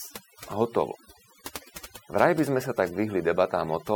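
Overdone noise removal runs through the whole speech clip. A noise reduction stage set too strong pulls individual frequency bands down or out wherever they sit close to its noise estimate, so the background thins into twinkling, warbling specks, and quieter parts of the voice are stripped away with it.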